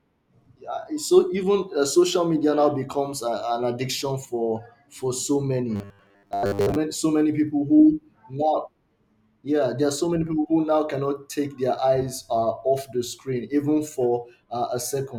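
From 5.76 to 6.76 s, after "for so", the speech collapses into a rigid 100 Hz metallic buzz: robotic sound, likely from repeating a 10 ms buffer through most of that second.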